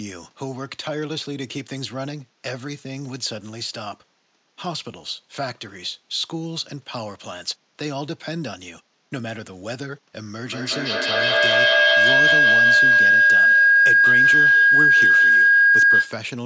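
Feedback howl takes over this speech clip from 10.46 s to 16.27 s, a tone near 1.5 kHz swelling to about 13 dB above the speech and pulsing roughly every 200 ms, as a microphone-to-loudspeaker loop in one room re-amplifies each pass until it rings.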